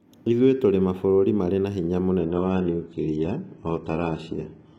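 At 2.19 s, right after "mabũrũri marĩ na hinya", the speech switches abruptly to an adaptive stream at a lower bitrate and stays there to the end. There is no gap, but the treble thins, with nothing above 11 kHz, which fits a drop from roughly 96 to 12 kbit/s.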